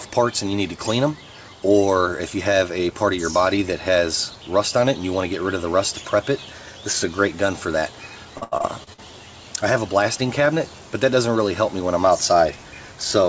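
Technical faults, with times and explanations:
8.38–9.00 s, repeated packet loss (robotic sound): six gaps in quick succession, the longest about 81 ms, are each bridged by extending the preceding sound. Over a third of the stretch is synthetic fill, so it turns choppy, with pieces missing. The sound is band-limited at 8 kHz throughout.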